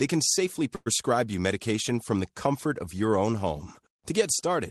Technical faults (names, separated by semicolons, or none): call audio freeze